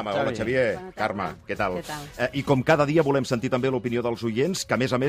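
No technical faults can be heard anywhere in this audio. Nothing in it stands out as a problem at any point.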